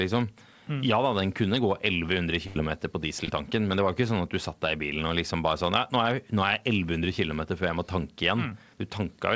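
At 2.47 to 2.61 s there is a burst of packet loss. About 80 ms of audio went missing. The receiver extended the preceding sound for roughly 86 ms while fading it out, giving a held, decaying smear before playback resumes slightly further along, with a small stretch skipped.

Short concealed packet loss follows at 3.25 to 3.29 s and again at 8.50 s, with gaps of about 20 ms and 10 ms. Each was patched by continuing the previous sound and crossfading back, which leaves a brief smear or wobble. Over the G.722 call path, the audio stops at 8 kHz.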